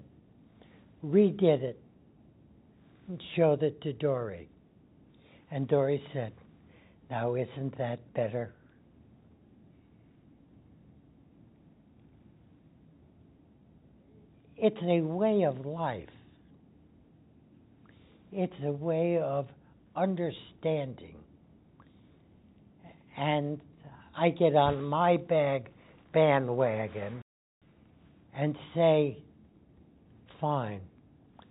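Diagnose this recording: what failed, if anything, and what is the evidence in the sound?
Nothing failed; the call path sounds as expected.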